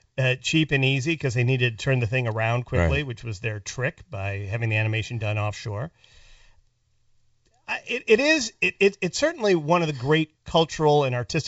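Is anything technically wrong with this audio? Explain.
No, nothing is technically wrong: this is speech over G.722 wideband telephone coding at its full 64 kbit/s rate, and the coded band up to 7 kHz sounds as that codec is meant to.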